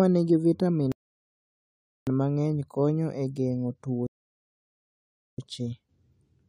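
At 0.92 s, after "nigi vitamin", the speech stops dead for 1.15 s: a rebuffering stall. The player ran out of buffered audio and waited. It resumes cleanly on "mang'eny konyo e geng'o". That phrase then halts again at 4.07 s for 1.31 s. Nothing is skipped.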